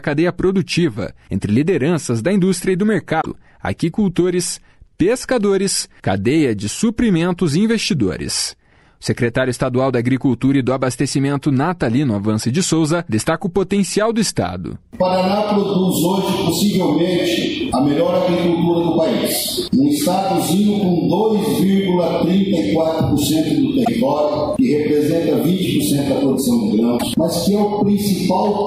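At 3.20 to 3.26 s, 23.84 to 23.88 s and 26.97 to 27.03 s, the sound skips ahead and garbles for about 50 ms. That is roughly two 26.1 ms frames. A broken MP3 bit reservoir is the likely cause. Frames went missing, so later frames decoded with the wrong bytes.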